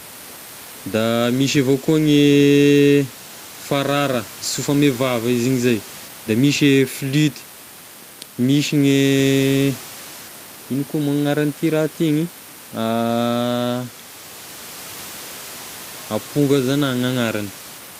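No technical faults are audible.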